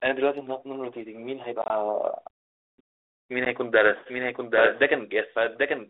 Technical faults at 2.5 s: none

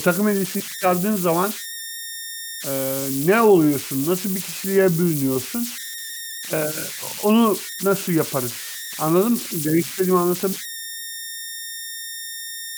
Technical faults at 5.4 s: converter idle tones

